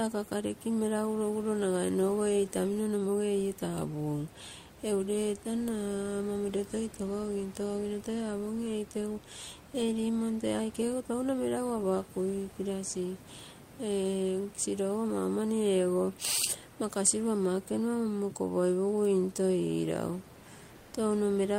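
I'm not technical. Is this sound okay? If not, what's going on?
No. Near the very end, from about 20.75 to 20.93 s, the natural room noise in a pause is briefly replaced by comfort noise in place of the background: a smooth, even hiss, slightly quieter, lasting under a fifth of a second. The sending side likely stopped transmitting during the pause to save data, and the receiver filled the gap with made-up noise. Unlike a dropout, the moment never goes silent; the background just turns flat and featureless.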